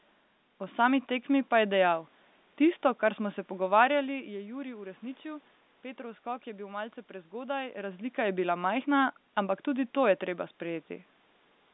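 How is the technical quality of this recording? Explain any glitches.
No glitches can be heard in this speech recording. It carries the narrow band of a G.711 telephone line, with nothing above about 3.8 kHz, and the level shifts around 3.5 s and 7.5 s come from the talker moving relative to the microphone.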